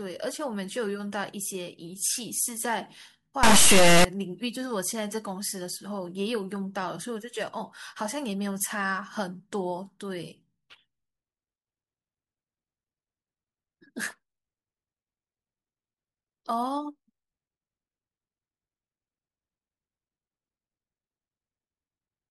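From 3.43 to 4.05 s, 32-bit integer samples are read as 32-bit floats, an integer read as float fault. The misread values swing between near zero and far beyond full scale, so the speech becomes an extremely loud, buzzing square wave, dropping to silence wherever the signal is very quiet.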